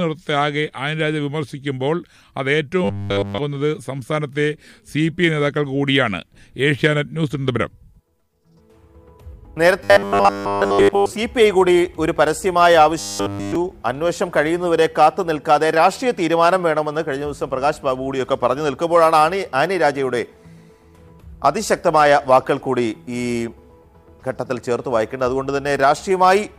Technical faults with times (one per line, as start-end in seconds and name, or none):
2.84-3.38 robotic sound from repeated short buffers
9.84-11.12 robotic sound from repeated short buffers
12.99-13.55 robotic sound from repeated short buffers